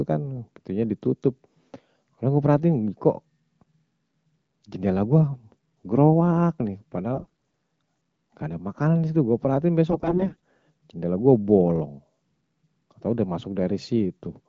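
Speech carried over AMR-WB wideband coding, with two bursts of AMR bit errors, at 7.16 to 7.27 s and 9.90 to 10.36 s. In both, pitch and level hold roughly steady, but the sound turns hoarse, scratchy and gargly. The less protected bits of the coded frames arrive corrupted, around one in seven, so the excitation pulses land in the wrong positions and the fine pitch, gain and spectral values drift, while the frames still pass their checksum and get decoded.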